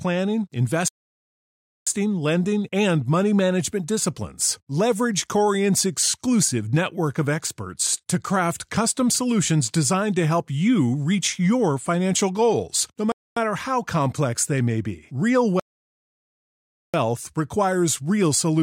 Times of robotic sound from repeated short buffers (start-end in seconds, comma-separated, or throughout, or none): none